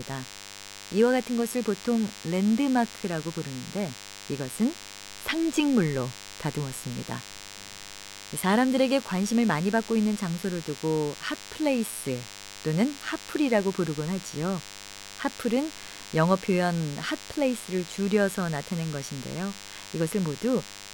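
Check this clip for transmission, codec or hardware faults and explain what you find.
One hardware fault runs through the whole speech clip. DECT cordless phone buzz sits about 15 dB below the speech. A nearby DECT transmitter's bursts, 100 per second, are rectified into a thin, harmonic-rich 100 Hz buzz.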